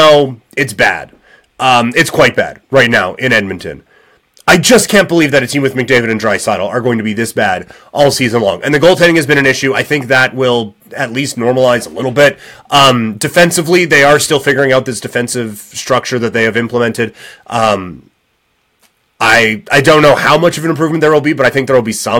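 Hard clipping runs through the whole speech clip. The signal is driven about 5 dB past the limit, so a few percent of peaks are cut flat, adding crackle.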